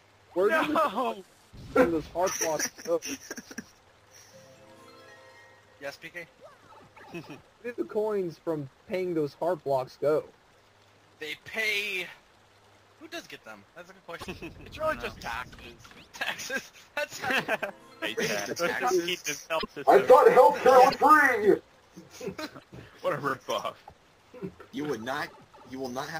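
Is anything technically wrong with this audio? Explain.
Yes. A broken MP3 bit reservoir is the likely cause of four brief disruptions, at 14.20, 19.58, 20.89 and 22.58 s, each lasting about 60 to 70 ms. At each point the audio skips ahead and the following instant comes out as a chirp, a noise burst or a short gap. Each disruption spans two to three frames of about 26.1 ms. When frames go missing, the next frame reaches back into the reservoir for borrowed bits, reads another frame's bytes instead and decodes garbage until the stream recovers.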